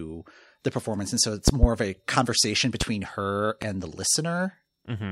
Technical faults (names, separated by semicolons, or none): loud pop